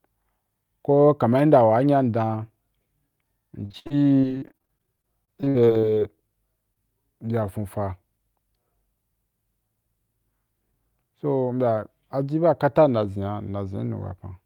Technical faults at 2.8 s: none

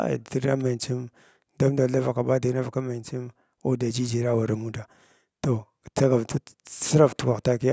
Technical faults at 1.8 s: none

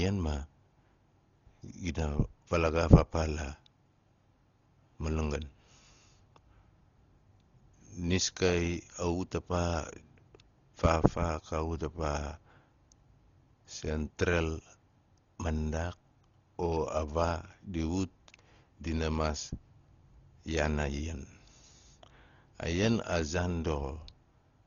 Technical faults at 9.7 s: Dolby Digital compression

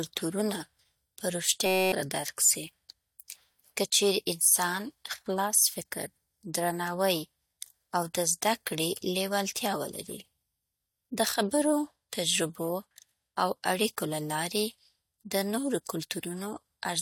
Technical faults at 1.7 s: system hang loop

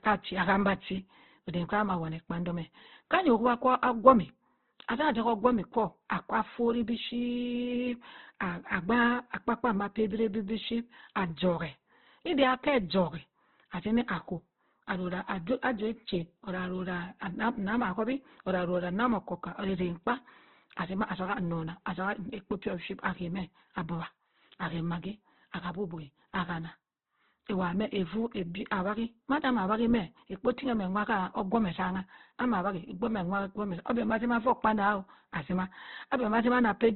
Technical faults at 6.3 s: Opus compression

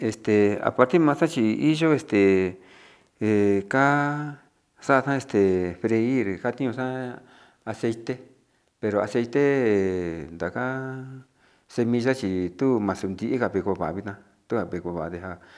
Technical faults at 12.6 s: none

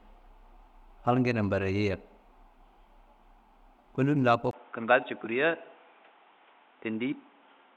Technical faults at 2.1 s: none

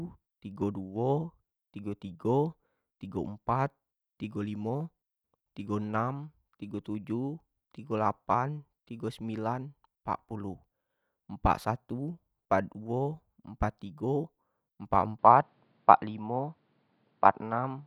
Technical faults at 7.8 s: none

